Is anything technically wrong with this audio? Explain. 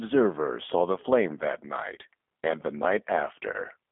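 Yes. The clip carries two faults.

G.729 codec, throughout: the speech has been squeezed through a low-rate CELP coder that models each 10 ms frame as a vocal-tract filter plus a pitch predictor and a handful of pulses, with the roughness pointing to about 8 kbit/s. The band runs only from about 250 Hz to 3.5 kHz, so the voice is thin and muffled, and the coding damage is plainly audible as a slightly rough, synthetic texture.

VoIP packet loss concealed by the speech codec, from 3.53 to 3.57 s: a brief gap, fitting a single lost 10 ms frame, was patched by the decoder extending its last pitch and filter at reduced gain. The result is a short stretched, fading blip, and because each frame builds on the previous one, the sound stays weak or distorted for tens of milliseconds or more after the stream resumes.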